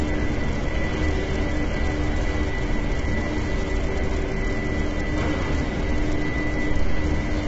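An everyday-sound recording, heavily degraded throughout by low-delay AAC compression, likely AAC-ELD at a low bitrate near 16 kbps: grainy, rough texture and nothing above 7.8 kHz.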